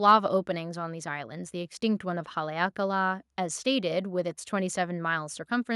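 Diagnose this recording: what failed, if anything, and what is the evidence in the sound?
Nothing in the recording points to a failure at any stage of the chain. The speech comes through without any event that would call for a diagnosis.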